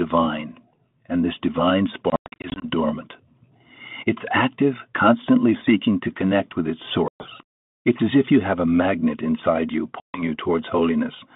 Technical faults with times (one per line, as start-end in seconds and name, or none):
2.10-2.66 packet loss on an ADPCM call
7.08-7.29 packet loss on an ADPCM call
10.00-10.34 packet loss on an ADPCM call